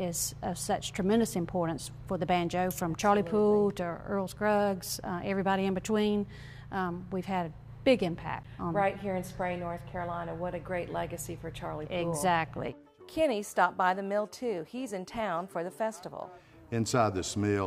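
At 8.43 s a CD skip: the laser jumps tracks, giving a tick and a mute of about 10 ms, then resumes elsewhere, unlike a dropout, which continues in place.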